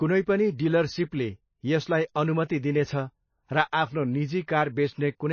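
Throughout, the speech is cut off above 6.6 kHz and has a watery, swirling shimmer, likely MP3 compression at a low bitrate; unlike a plain low-pass, weak frequencies flicker between frames.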